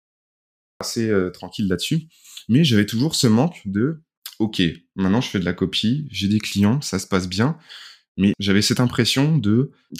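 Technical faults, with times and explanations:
0.00 to 0.81 s, cut-off start: the speech is preceded by pure digital silence and then drops in abruptly at 0.81 s, mid-sound, just before "euh tranquille", with no natural attack or fade-in. The capture or stream began late, missing the sound's true onset.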